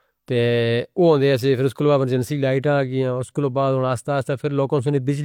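No technical faults can be heard anywhere in the recording.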